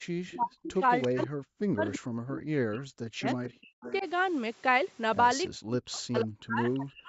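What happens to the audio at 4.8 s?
At 4.8 s the speech runs on intact, with nothing breaking or disturbing it, just the steady band-limited character of a call line with no content above 8 kHz.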